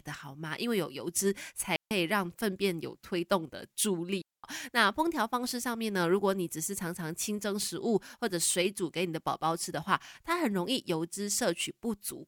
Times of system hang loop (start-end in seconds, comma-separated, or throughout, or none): none